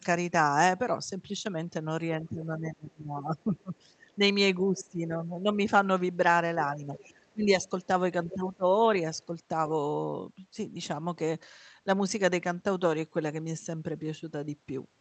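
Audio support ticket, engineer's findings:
Speech suppressed in double talk, 2.11–4.1 s. Level drops in patches, about 25 dB at deepest, roughly 1.5 s affected. Likely cause: echo canceller attenuating near-end talker while far end is active. Same symptom at 4.69–5.58 s, 6.77–7.48 s and 8.26–8.64 s, each dipping about 15 dB. Suppressor can't separate local speech from loudspeaker echo during overlap, so it ducks both.

Other side's voice leaking through, short scraps at 4.77–4.84 s, 6.95–7.14 s, 8.30–8.34 s and 9.21–9.25 s. Residual far-end speech, about 15 to 40 dB under the talker, faintest at 9.21 s. Likely cause: incomplete echo cancellation of loudspeaker playback picked up by the mic. First three leaks coincide with the suppression windows. Canceller adapts poorly during double talk. Top end stops near 8 kHz, as expected from an Opus call path.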